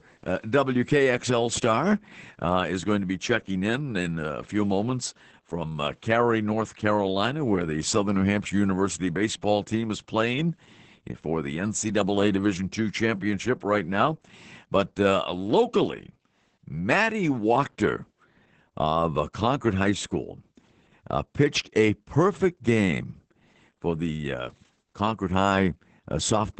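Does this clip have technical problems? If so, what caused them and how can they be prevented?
Yes: Opus voice compression runs throughout the speech, which sounds muffled, hoarse and slightly robotic, as coarse excitation coding at a rate near 10 kbps predicts. A spectrogram shows energy cut off near 17.9 kHz with smeared, blocky harmonics. Prevent it by encoding at a higher bitrate.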